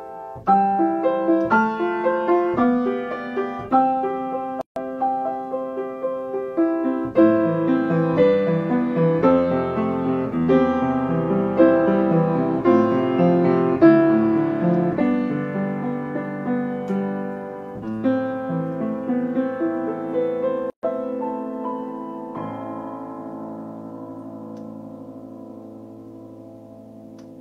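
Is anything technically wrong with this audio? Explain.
Yes, there are two gaps at joins of encoded pieces, at 4.61 to 4.76 s (150 ms) and 20.70 to 20.83 s (130 ms). Separately encoded chunks kept their start delay and end padding, so the sound drops out briefly with smeared edges, then resumes where it stopped.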